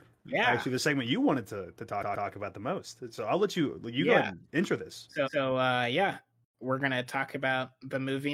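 Speech, with two stutters from repeated frames. At 1.98 to 2.24 s, after "you wanted to to", a 128 ms chunk plays twice more, adding 256 ms. At 5.23 to 5.40 s, after "ahead and intro this", a 171 ms chunk repeats once. Duplicated compressed frames make the decoder replay them.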